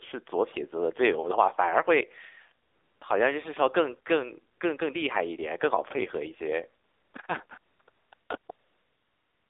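AMR narrowband mobile codec damage runs through the whole of this speech clip: the sound is confined to a telephone band of roughly 300 Hz to 3.6 kHz, with nothing above 4 kHz. The voice has a plainly audible buzzy, synthetic edge. That fits a low-rate mode around 7.4 kbps, where a vocal-tract model driven by a few pulses per subframe replaces the real waveform. AMR comfort noise appears in ten pauses between 2.66 s and the end. The first few are isolated: 2.66 to 3.02 s, a brief one at 4.54 s, and 6.84 to 7.14 s. From 7.46 s onward the pauses come in rapid succession, lasting 40 to 220 ms, and the last runs from 8.52 s to the end, nearly a second. In each gap the sender stopped transmitting speech frames, and the receiver filled the silence with smooth synthetic noise built from a coarse level-and-spectrum description. The result is a steady hiss that switches abruptly in and out.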